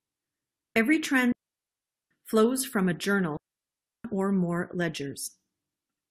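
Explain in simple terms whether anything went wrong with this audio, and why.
Two things went wrong. First, a digital wireless dropout: the wireless link lost too much data, so the receiver briefly muted itself. That leaves clean holes of near silence, without hiss or crackle, from 1.32 to 2.11 s, just before "flows from a", and from 3.37 to 4.05 s.

Second, damaged data in a compressed stream: part of the stored or streamed audio was corrupted, so the decoder lost its place and had to find the next readable chunk. You hear a short glitch at 2.91 to 2.94 s, after "flows from a", and at 5.26 to 5.28 s, after "or more".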